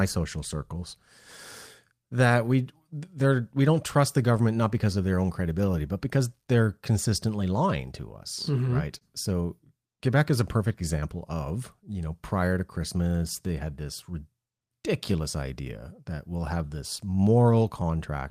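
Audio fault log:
Throughout: clock drift between sender and receiver. The far end's clock runs a touch slow, somewhere around one and a half percent. The jitter buffer keeps running low, so the receiver has to pad things out. That's why you get small, unevenly spaced timing hiccups across the whole clip.
0.57–8.52 s: repeated timing corrections. To cover the slow sender, the receiver keeps repeating tiny slices and plays the stretch at about 99% speed, adding something like 70 ms overall. It comes across as a slightly loose, unsteady tempo with occasional soft stutters.
8.98–9.04 s: short stall from a late packet. A packet turned up late and the buffer ran dry. The receiver held the last sound for 28 ms until it arrived, then carried on from the same spot. Nothing's lost, but one sound hangs a bit long with a faint buzz or dip.
11.34–17.81 s: repeated timing corrections. Same story as the first run. 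Playback sits at about 99% speed, with small repeated pieces adding roughly a tenth of a second in total. You hear it as a gently dragging rhythm and scattered little hiccups rather than any clear break.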